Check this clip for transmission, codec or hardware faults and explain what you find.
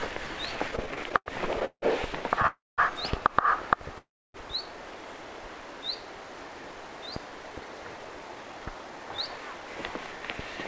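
The clip shows three network-timing faults. The codec path has nothing above 8 kHz, which fits G.722.

Repeated stalls (stutter), 0.68–2.45 s: thirteen short gaps, the longest 170 ms, where late packets emptied the jitter buffer and the last sound was stretched. Unlike a freeze, the stalls are brief and many.

Call audio freeze, 2.47–2.80 s and 3.98–4.36 s: single holds of 308 ms and 363 ms, most of each fading to silence, likely from packets held up in transit. The audio resumes where it stopped.

Jitter buffer speed-up, 6.48–10.13 s: the receiver trimmed pitch-period slices, about a fifth of a second in all, so the audio runs 6% fast at the same pitch, hurried but not chipmunk-like.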